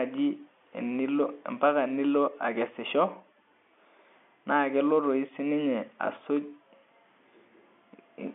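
Nothing stood out on listening to this telephone-band speech, which carries the narrow, top-limited sound of an ordinary G.711 line.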